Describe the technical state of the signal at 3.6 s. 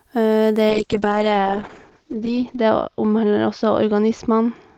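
At 3.6 s you're inside a call bitrate drop that starts at 0.71 s and runs to the end. The bandwidth estimate collapsed, so the encoder went from 32 kbps down to 8 kbps, bottoming out for about 1.9 s. At that rate it codes the speech coarsely and narrows the band from 20 kHz to 8 kHz, so the voice sounds muffled, rough and watery, with the airy top end gone.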